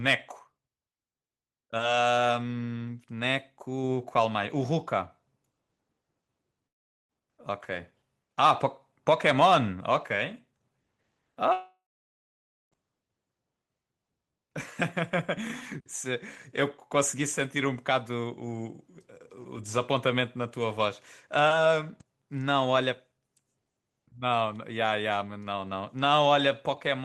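Long network dropouts at 6.67 to 7.12 s and 11.53 to 12.75 s: the speech decays into near-silence, likely because packets never arrived, losing 0.42 s and 1.2 s.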